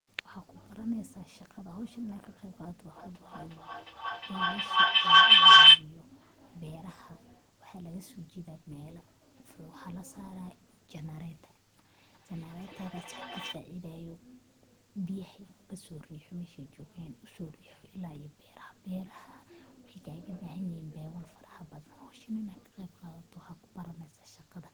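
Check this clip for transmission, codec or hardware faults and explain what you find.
Two faults can be heard, both from two devices in one room joined to the same call.

From 2.93 to 5.88 s there is a feedback howl. Sound leaves one loudspeaker, reaches the other microphone and returns louder on each trip. The loop gains level, so it grows instead of fading. It narrows to a shrill tone around 3 kHz. The tone pulses roughly every 0.4 s, the loop's delay. At its peak it is about 26 dB above the speech.

From 11.98 to 13.64 s there is a feedback echo between two devices. One device plays what the other's microphone sent. That microphone picks it up again. Each echo canceller removes only its own device's playback, so the sound survives. The speech comes round again roughly every 0.4 s. The repeats are thinner and more ringing. They reach about the same level as the speech.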